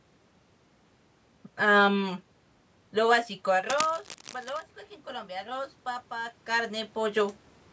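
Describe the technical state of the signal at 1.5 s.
At 1.5 s the speech signal is intact, with no technical fault, only the room noise in the background and the usual low-bass trimming of call microphone processing.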